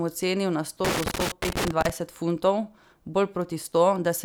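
Right after "ocenil na sto", from 0.85 to 1.90 s, loose connector crackle breaks in: a worn contact making and breaking chops the speech into an irregular scratching burst. The waveform shows jagged dropouts and spikes, and the spectrogram shows scattered broadband vertical streaks.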